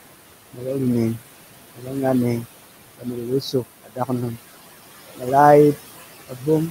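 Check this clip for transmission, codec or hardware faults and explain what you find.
Two faults come from the noise suppressor, acting on speech. Room noise, about 14 dB below the voice, is part of the recording.

Noise suppressor artifacts, throughout: steady noise is pulled down by about 16 dB between phrases and returns under speech.

Speech cut by the noise suppressor, from 2.97 to 3.64 s and from 3.84 to 4.10 s: parts of the speech, around a fifth of a second in each stretch, were mistaken for noise and dropped by about 17 and 18 dB. Those sounds seem swallowed, not broken off as in a dropout.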